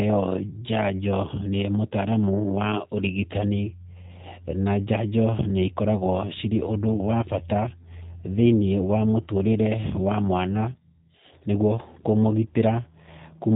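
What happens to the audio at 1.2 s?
At 1.2 s the speech sounds plainly rough and synthetic, with nothing above about 3.8 kHz, as it does for the whole clip. This is G.729 codec damage: each 10 ms frame is rebuilt from a vocal tract filter, pitch predictor and a few pulses, which fits an 8 kbit/s VoIP stream.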